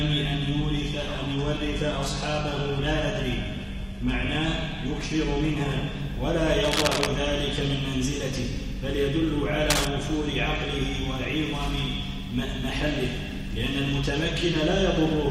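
For the first 6.0 s, the audio plays as an adaptive stream starting at a low bitrate. Nothing is heard above about 12.3 kHz. The upper treble is dull or synthetic, and compression artefacts are stronger. This points to a low-rate HE-AAC version near 16 kbit/s, picked so playback could begin fast. At 6.0 s the player has measured the connection. Quality steps up at once, with no gap. The sound suggests a move to AAC-LC near 96 kbit/s.

Cable scratch noise follows, from 6.64 to 7.07 s and again from 9.70 to 9.87 s. Dense, uneven bursts of scratching and rustling sit over the sound. They are roughly as loud as the sound itself. The likely cause is a worn cable, connector or control being moved. Its contact resistance then jumps about rapidly.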